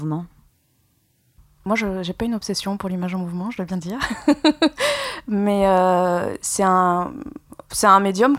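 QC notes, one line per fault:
No technical faults heard.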